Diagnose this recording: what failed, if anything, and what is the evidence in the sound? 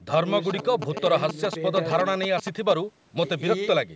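GSM signalling bursts got into the analogue wiring, from about 0.50 s to 2.72 s of the speech. You can hear the galloping dit-dit-dit of short buzzes repeating at 217 Hz, sitting only a little below the speech level. A nearby 2G phone was signalling, and an analogue stage rectified its radio bursts into audio, so the burst envelope lands in the signal. The band-limiting from the call's microphone processing is normal, and it tops out at 8 kHz.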